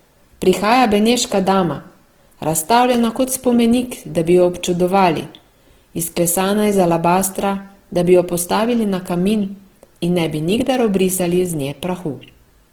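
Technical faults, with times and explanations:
Throughout, Opus compression. The speech sounds rough and grainy across the whole clip, and the damage is plainly audible. When bits run short, the codec refills bands it cannot afford from folded lower bands or from noise. So tones turn coarse and noisy rather than swirling, and few spectral holes open. The bandwidth stays full, with content up to about 20.2 kHz. The likely cause is Opus in its music mode, and the sound fits a bitrate of 16 kbps.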